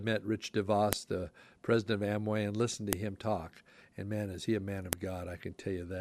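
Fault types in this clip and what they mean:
File header played as audio: Sharp, loud snaps cut through the speech at 0.93, 2.93 and 4.93 s, exactly every 2.0 s, regardless of what the speech is doing; each 2-second piece was joined with its WAV header intact, so those header bytes played as samples.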